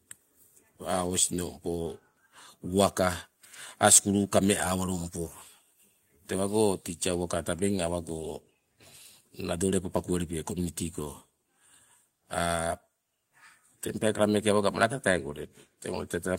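No technical faults are audible.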